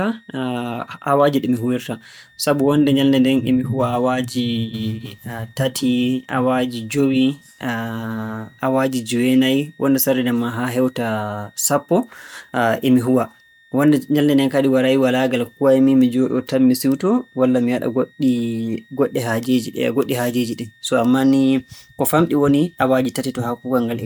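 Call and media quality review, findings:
High, faint whistle under the speech for the whole clip, some 35 dB down, pitch wandering between 1.81 and 1.92 kHz. Probable component: a switching power supply whose audible burst-mode cycling shifts frequency with load. Switching supply whistle.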